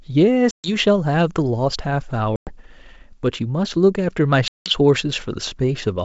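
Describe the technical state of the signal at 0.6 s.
At 0.6 s the sound sits inside packet loss on an ADPCM call, spanning 0.51 to 0.76 s: about 130 ms of audio vanish, which fits roughly fifteen lost packets, leaving a hard-edged silent hole. A spectrogram shows a blank vertical band across the full 7 kHz G.722 range, and the waveform a flat line. Afterwards the decoder's predictor and step size are out of step with the sender's, so speech returns slightly distorted, settling within tens of milliseconds.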